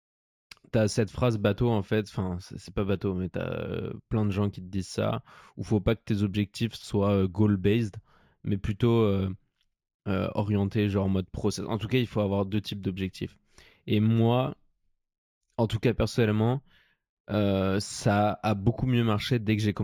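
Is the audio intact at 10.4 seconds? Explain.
No. Imaging from linear upsampling runs through the whole clip, including 10.4 s. The sound fits 16 kHz audio raised to 44.1 kHz by straight-line interpolation. The top is dulled. A faint mirrored image between 8 and 16 kHz, roughly 35 dB down, adds metallic shimmer to sibilants.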